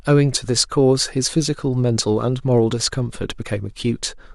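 Speech, with a block of digital silence at 3.42 s. For about 0.42 ms the sound drops straight out and then resumes, with no fade on either side. Because the hole is so short, the two edges merge into a single tick rather than an audible gap. Zeroed blocks like this arise when the output buffer is not filled in time or a calculation yields invalid values.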